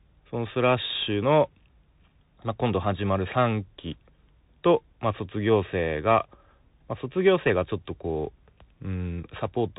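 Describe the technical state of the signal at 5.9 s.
At 5.9 s the speech is carried through the Bluetooth CVSD headset codec, which colours the whole clip rather than just this moment. The coder sends a single up-or-down bit per sample and keeps resizing its step, a scheme that fits a 64 kbps link. The band stops near 3.8 kHz, so the sound is plainly narrowed, with a grainy hiss beneath it, scratchy sibilants, and harsh slope overload where bright, loud content changes faster than the step can follow.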